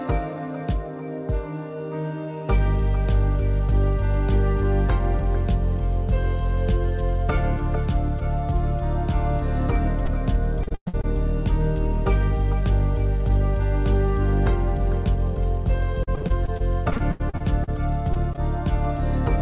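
Short concealed packet loss at 10.06 s: about 20 ms of the call failed to reach the decoder in time, and the receiver covered the gap by extending the sound just before it, then blending back into the real signal. It comes through as a brief smear or wobble, heard over a band that stops at 4 kHz, which fits a G.711 mu-law call at 64 kbps.

Repeated packet loss (robotic sound) runs from 10.63 to 11.05 s. Five gaps remove about 260 ms, the longest 118 ms, so over half of this stretch is patched rather than real. Each hole is filled by stretching the preceding sound, and the next hole arrives before the audio settles. The result is a choppy texture with pieces dropped out.

Repeated packet loss returns from 16.03 to 17.69 s. There are 14 shorter gaps, none longer than 78 ms, adding up to 380 ms, about a quarter of the span. The dropouts are spread thinner here, so the effect is a longer, intermittently robotic stutter rather than one dense burst.

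Short concealed packet loss strikes twice more, at 18.13 s and 18.33 s. Each time about 20 ms is missing and is filled by continuing the last sound. Both are heard as quick wobbles, and a short sound falling in either gap can disappear.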